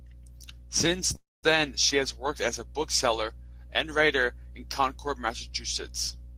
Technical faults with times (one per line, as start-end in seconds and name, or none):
1.15-1.46 call audio freeze